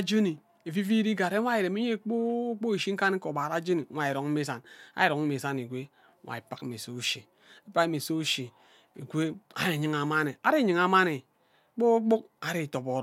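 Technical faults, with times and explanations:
No technical faults are audible in the speech recording; the signal level, timing and continuity show no disturbance at any point.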